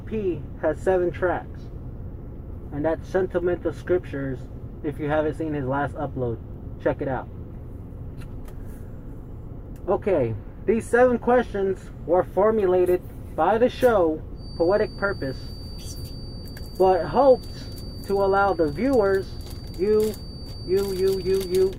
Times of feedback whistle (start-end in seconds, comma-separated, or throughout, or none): 14.33-21.79